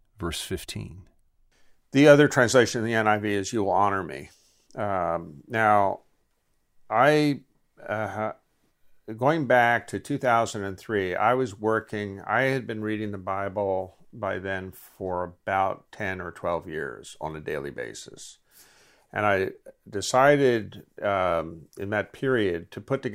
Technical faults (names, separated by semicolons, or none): none